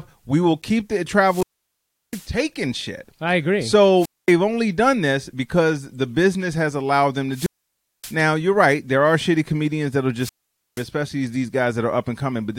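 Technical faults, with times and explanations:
1.25–2.29 s, 3.98–4.34 s, 7.31–8.17 s and 10.18–10.86 s: wireless microphone squelch dropout. The speech clip's radio link fades until the receiver's squelch cuts the output, so hiss swells before holes of near silence lasting 0.70, 0.23, 0.58 and 0.48 s. The first follows "will keep the", and the speech returns with "shit I agree".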